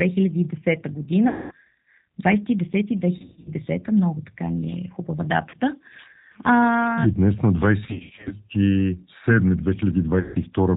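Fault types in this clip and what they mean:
G.729 codec: The whole clip runs through G.729, an 8 kbit/s telephony codec that rebuilds speech from a vocal tract filter, a pitch predictor and a few pulses per 10 ms frame. Its damage is plainly audible as a rough, slightly synthetic edge. On a spectrogram, energy stops sharply at 4 kHz with nothing above, and the harmonics look smeared. The waveform looks coarser than the original speech would.
VoIP packet loss concealed by the speech codec: There are gaps at 1.28 to 1.52 s, 3.18 to 3.51 s just before "много така", 5.49 to 5.55 s after "е хубава", 7.85 to 8.35 s after "днес на", and 10.20 to 10.36 s. In each one the decoder extrapolates from its last pitch and filter, stretching the sound into a buzzy tone or coloured noise that fades. Spectrograms show flat, repeated bands, and the waveform envelope decays through each run of lost frames.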